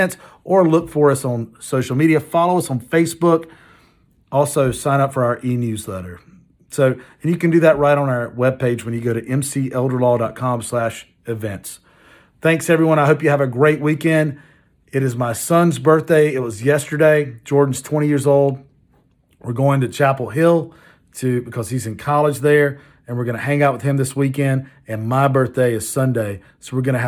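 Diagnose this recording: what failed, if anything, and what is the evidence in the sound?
Nothing failed; no fault is audible anywhere.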